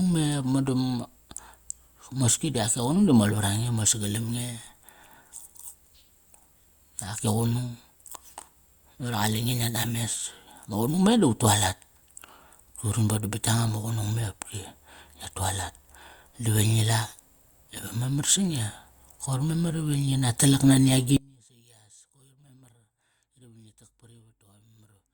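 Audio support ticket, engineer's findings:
Audio dropout to faint residue from 21.17 s after "talak nani" to end: waveform abruptly thins to trace below; likely upstream feed lost.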